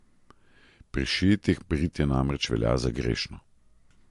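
From start to finish the speech sounds watery and swirly, and nothing comes through above 11.3 kHz. That's likely MP3 compression at a low bitrate, around 55 kbps, with the encoder cutting the top end and letting weak detail flicker in and out frame by frame.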